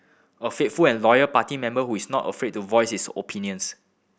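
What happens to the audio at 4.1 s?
Nothing goes wrong at 4.1 s; the speech continues intact through that moment with no dropout, click or distortion.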